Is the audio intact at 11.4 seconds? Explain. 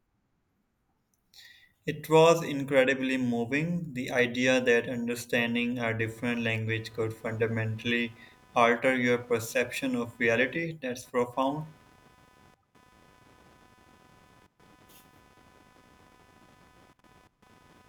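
No. Computer activity noise runs from 5.99 s, after "idea that understanding a", to the end: ground shifts from processor, graphics card or mouse load add a buzz pulsing near 300 Hz, roughly 30 dB below the speech, seen on a spectrogram as faint evenly spaced horizontal bands.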